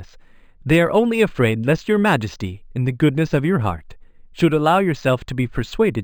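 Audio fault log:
throughout, imaging from linear upsampling: straight-line interpolation, which fits 11 kHz raised to 44.1 kHz, dulls highs and leaves mirror images near 5.5–11 kHz, shimmering on sibilants.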